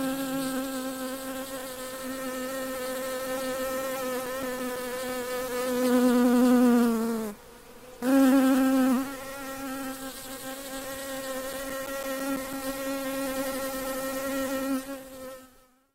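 CD scratch ticks appear twice, from 3.76 to 5.26 s and from 11.36 to 12.70 s. Each burst is a run of short ticks, about seven a second, lasting a few milliseconds each. A scratch defeats the error correction once per disc turn, so the player patches or mutes those samples.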